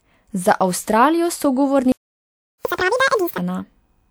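At 1.92 s the speech just cuts out and stays silent until 2.65 s, roughly three quarters of a second. That's a playback stall, most likely the player running dry of data or its thread getting blocked, so nothing reached the output until it recovered.

Right as sound returns at 2.65 s you get catch-up at higher speed: the player races through its backlog at 2.0 times normal speed, so pitch jumps by around ten semitones. It runs that way until 3.38 s, then settles back to normal.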